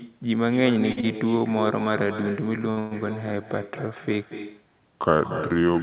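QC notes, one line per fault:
Throughout: echo with no canceller. The far end plays the call over a loudspeaker, its microphone picks it up again, and no echo canceller removes it. Every phrase comes back around a fifth of a second later, about 8 dB below the direct sound. The copy sounds thinner because it has passed through the room and the narrow telephone band twice, so the speech carries a constant hollow shadow.
0.92–0.99 s, 1.01–1.05 s, 1.39–1.43 s and 2.71–2.79 s: short stall from a late packet. Each time, a packet missed its playout slot, the jitter buffer emptied, and the receiver stretched the last sound until the data arrived. The holds last 47 ms, 21 ms, 18 ms and 64 ms. Nothing is dropped, but a sound hangs on slightly too long.
2.79–2.93 s: call audio freeze. Straight after the 2.71 s stall, the network likely held packets back for longer and the buffer ran dry again. The receiver kept extending the last sound for about 120 ms as a tail that never drops to silence. 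The audio then picks up exactly where it stopped. The gap is added time rather than lost speech, which makes this stretch sound briefly stuck.
4.9 s to the end: section at the wrong speed. The last stretch plays at about 0.8 times its proper rate, so speed and pitch fall together, roughly four semitones lower. This is likely a resampling or clock mismatch in editing or playback. The voice suddenly turns deeper, slower and heavier, with a sharp change at 4.9 s rather than a gradual drift.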